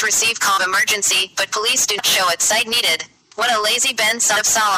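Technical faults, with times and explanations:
0.56 s, 1.98 s and 4.35 s: compressed frames skipped. At each point the audio jumps forward, losing roughly a fifth of a second, about 150 ms and about half a second, which corresponds to some seven, seven and twenty whole frames. Each frame is 26.1 ms long, which fits 1152-sample frames at 44.1 kHz.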